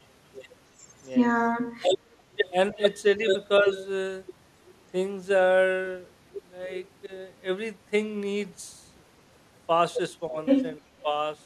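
Echo leak, 2.12 to 2.99 s: a faint delayed copy of the speech trails it by 310 ms, sitting about 25 dB below. The far end's echo canceller likely let some of its loudspeaker pickup through and sent it back.

Speech suppressed in double talk, 3.18 to 3.27 s: the speech dips by a few dB for about a tenth of a second. Both sides were talking, and the echo canceller likely turned the talker down along with the echo.

Echo leak, 3.41 to 3.87 s: the 310 ms echo returns, now louder at about 15 dB below the speech and easier to hear.

Speech suppressed in double talk, 3.60 to 3.70 s: inside that echo, the speech drops again by a few dB for about a tenth of a second.

Speech suppressed in double talk, 7.06 to 7.11 s and 10.30 to 10.36 s: two shorter dips, each well under a tenth of a second, cut deeper at around 10 dB.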